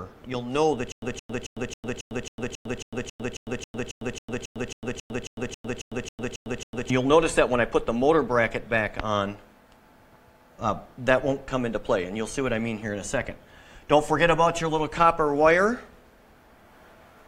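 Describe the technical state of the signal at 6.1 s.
At 6.1 s the signal is in a stutter with silent gaps, running from 0.92 s to 6.90 s. A 169 ms fragment repeats 22 times, each followed by about 103 ms of dead digital silence, giving a steady 272 ms cycle. This is likely a stalled player replaying its last fragment on each retry. Random dropouts would cut new audio at irregular points, and a clean loop would have no gaps. Here the same burst returns at an even pace with true silence between, and the audio meant for that span is lost.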